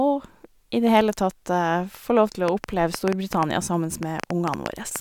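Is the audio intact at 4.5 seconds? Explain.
No. A train of clicks runs from 2.48 to 4.97 s: about fifteen same-shaped pulses, about 5.7 per second at uneven spacing, spiking well above the speech, likely from interference or a faulty connection or power supply. Unlike a single click, it repeats as ticking, even in pauses.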